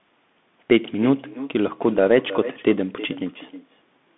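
Throughout this speech recording, two faults run together. The first is echo with no canceller: every phrase returns about 15 dB quieter roughly a third of a second later, and thinner, as the far end's loudspeaker feeds its own microphone and nothing subtracts it. Unlike room reverberation, which smears continuously from the moment a sound starts, this is a distinct delayed copy, trailing the original syllable for syllable. The second is the Bluetooth CVSD headset codec, whose damage is plainly audible. The line passes roughly 150 Hz to 3.6 kHz, with nothing above 3.8 kHz, so sibilants lose their top and turn scratchy. What separates it from an ordinary narrowband phone codec is its one-bit, up-or-down coding, which fits a 64 kbps stream. A granular hiss sits under the speech, and loud, bright sounds outrun the adapting step size and break up into harsh distortion rather than simply sounding muffled.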